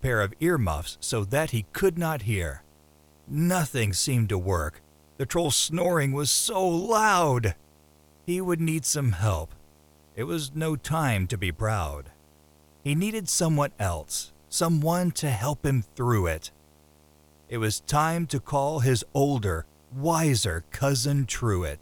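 From the start of the clip to its end, a video or display buzz sits under the speech. Interference from a screen or its video cabling is coupling into the audio path, producing a steady buzz at the picture's 75 Hz field rate with a fizzy hash of harmonics above it. It stays well below the speech, roughly 35 dB down, but it is constant and is clearest in pauses between phrases.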